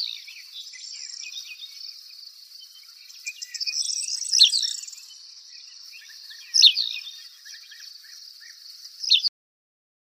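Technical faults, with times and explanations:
9.28 s, cut-off end: the audio stops abruptly in the middle of a sound and drops straight to digital silence for the rest of the clip, with no decay or fade. The final buffers of audio were never written or played back.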